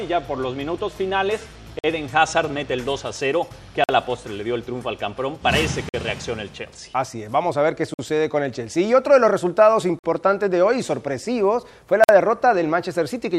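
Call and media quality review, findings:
Short, hard-edged holes of silence, 50 ms each, at 1.79–1.84, 3.84–3.89, 5.89–5.94, 7.94–7.99, 9.99–10.04 and 12.04–12.09 s. Regular cadence: 2.0 s of audio, then a gap. No content missing, only interrupted at each join. Gap between chunks. Probable component: chunked transport or playback stage. Mechanism: audio is handled in 2 s blocks and 50 ms of silence is inserted where consecutive blocks meet.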